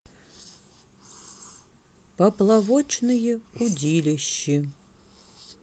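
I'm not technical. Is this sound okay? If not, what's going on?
Yes, nothing in this speech recording points to a technical problem with how the sound was captured or delivered.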